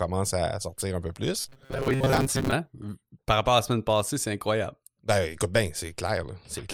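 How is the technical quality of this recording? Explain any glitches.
One glitch stands out. From 1.41 to 2.54 s, after "à sortir un peu", the speech turns into a rigid 134 Hz metallic buzz. This is robotic sound from repeated short buffers, likely 7.5 ms loops replacing about half the audio.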